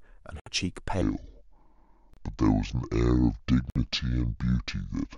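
At 0.40 s the speech drops to silence for about 67 ms, then resumes where it left off. This is a Bluetooth stall, likely caused by radio interference delaying packets until the headphone buffer ran empty. A splice or edit would skip material, but here the sound picks up where it stopped. The gap is clean digital silence, not the warbling or smeared fill of codec packet-loss concealment.

From 1.02 s to the end, the speech plays as a section at the wrong speed, at 0.638 times its original rate. It sounds slower and deeper, dropped by about seven semitones, likely because this stretch was fitted to the wrong clock during playback or editing. Pitch and tempo fall together, and that sets it apart from a pitch shift, which leaves the pace alone, or a time stretch, which keeps the pitch.

Two more Bluetooth stalls fall inside this slowed section, at 2.14 s with about 32 ms of silence and at 3.70 s with about 56 ms. 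Each is a brief hard gap, after which the speech carries on from the same point.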